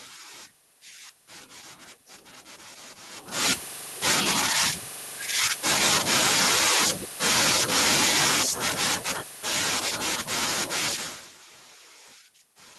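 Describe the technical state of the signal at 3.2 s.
At 3.2 s the signal is intact, with no technical fault; the level change around then comes from the talker shifting position relative to the microphone, and the room's background noise is part of the recording.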